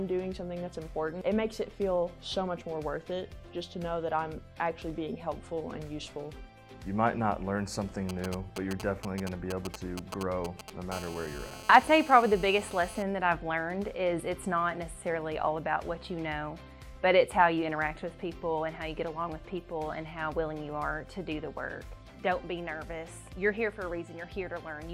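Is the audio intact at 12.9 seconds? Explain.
No. GSM phone buzz runs from 10.93 to 13.03 s: a nearby 2G handset on a call transmits bursts 217 times a second, which the audio circuitry rectifies into a steady, raspy, harmonic-rich 217 Hz buzz, about 16 dB below the signal.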